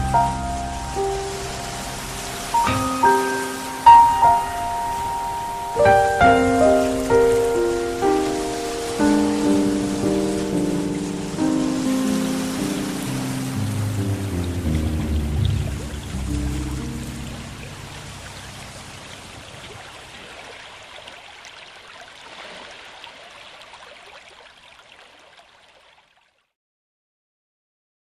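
At 11.85 to 11.96 s there is a skip ahead. Audio was discarded in transit or by an overflowing jitter buffer while later audio was already queued, so playback leapt forward by roughly 0.7 s. Nothing was inserted to cover the join, and the two sides meet almost directly, so the sound jumps abruptly with no audible pause, as if a piece had been snipped out.

Two jitter buffer speed-ups follow. With more audio queued than its target, as after delayed packets arrive in a burst, the receiver repeatedly cut out short pitch-period-sized pieces to reduce the delay. From 13.44 to 14.58 s playback runs at about 106 % speed, shedding around 70 ms. From 15.12 to 15.94 s it runs at about 109 %, shedding roughly 100 ms. In both stretches the pitch stays the same while the sound runs faster and feels hurried.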